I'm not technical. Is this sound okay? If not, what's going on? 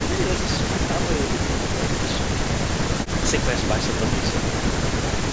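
Yes, this sound is okay, and nothing is going wrong in it.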